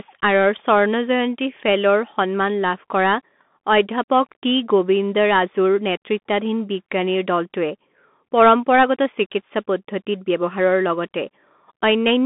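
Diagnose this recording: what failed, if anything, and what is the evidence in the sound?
Codec stage, throughout: a Bluetooth CVSD headset codec, with nothing above 3.8 kHz, scratchy sibilants and granular hiss, consistent with one-bit, 64 kbps delta modulation overloading its adaptive step.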